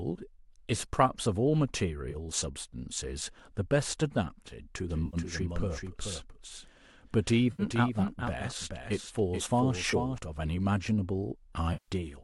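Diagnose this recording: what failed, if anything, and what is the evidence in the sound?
The codec/network stage is dropping AAC frames and the decoder is concealing them. You can hear smeared, noisy patches at 2.11–2.16 s, 5.06–5.17 s, 7.52–7.63 s and 9.91–9.94 s, and a longer one at 11.73–11.91 s. That last gap runs about 150 ms, long enough that the fill-in sags toward silence before the sound comes back. The gap lengths step in multiples of 10 ms, which fits the short frames of the low-delay AAC in use here. The decoder is just stretching the last good spectrum over each hole.

There's also a doubled audio track from 4.90 s to 10.18 s. A full-band copy of the same sound trails the original by roughly 0.4 s and sits a few dB lower. It has no room tail and no decay, and it switches on and off abruptly at those edges. That points to the playback or capture stage, likely a second, slower path picking up the same signal and being mixed back in, rather than any acoustic echo.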